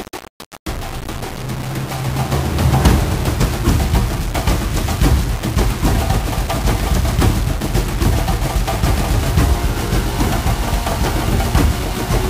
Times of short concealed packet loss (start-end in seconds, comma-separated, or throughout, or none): none